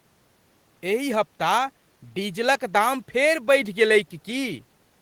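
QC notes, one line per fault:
No faults found; the low room noise sits about 42 dB below the speech.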